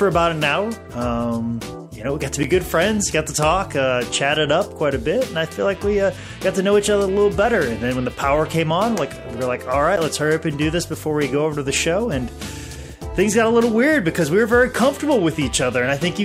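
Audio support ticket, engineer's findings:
Block of digital silence at 2.43 s and 9.96 s. Each a short tick, not an audible gap: audio drops straight to silence for about 10.7 ms, hard edges, no fade. Length fits a 512-sample buffer. Probable component: audio callback or render thread missing its deadline, output buffer left unfilled. Unlike a fade-out dropout or a single-sample glitch, there are hard edges bracketing a silent block, and both events are the same size.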